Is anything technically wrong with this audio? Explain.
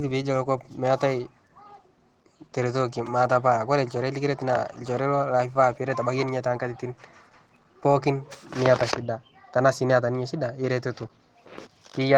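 Yes. Opus voice compression is plainly audible throughout the speech, at a bitrate that fits about 16 kbps in hybrid mode. The band below 8 kHz is coded by linear prediction with a coarse excitation, leaving the voice hoarse and slightly robotic. A thinner transform layer carries the band above it in 20 ms frames. On a spectrogram the region above 8 kHz looks patchy and smeared frame to frame, and nothing appears above 20.2 kHz.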